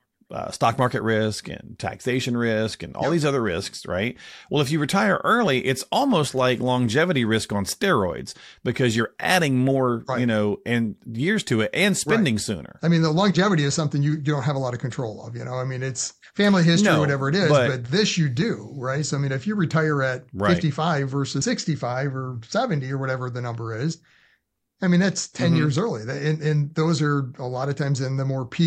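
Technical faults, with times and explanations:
27.64 s, repeated buffer: just after "and those are a", fresh audio arrived late and a 1.45 ms block, which fits a 64-sample buffer, played twice. At that size the repeat is a click, seen as a hard waveform step and a thin vertical broadband spectrogram line.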